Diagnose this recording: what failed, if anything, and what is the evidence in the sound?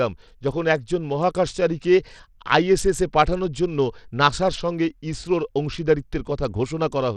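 Codec stage throughout: the treble flickers out under a gritty grain as starved top sub-bands lose bits, likely Bluetooth SBC compression at around 80 kbps.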